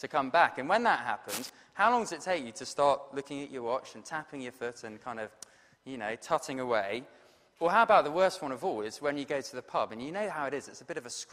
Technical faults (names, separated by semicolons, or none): cable scratch noise